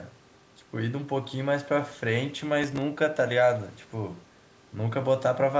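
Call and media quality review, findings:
Processor overload crackle, 2.64 to 2.82 s on the speech: gritty tearing burst. Probable component is the audio processing thread. A handful of consecutive missed deadlines on buffers of a few milliseconds, each refilled with stale audio and leaving hard edges.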